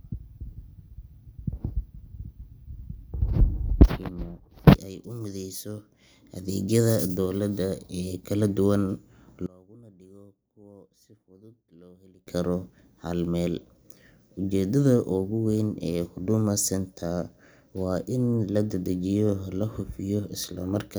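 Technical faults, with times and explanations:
9.46–12.27 s, one channel inverted: speech sinks about 27 dB to a faint residue before "karo hal meel", likely a polarity-flipped channel cancelling in mono.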